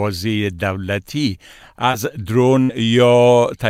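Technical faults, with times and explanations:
1.91 to 1.95 s, short concealed packet loss: a brief smear or wobble. About 20 ms of audio never reached the decoder in time. The receiver filled roughly 15 ms by continuing the preceding sound, then blended back into the real audio.
2.63 to 2.71 s, burst of packet loss: the sound stalls into a held, fading continuation, then picks up further along. About 60 ms was lost or arrived too late. The receiver stretched the last sound for around 62 ms, turning it down as the gap went on, so the part in between is missing.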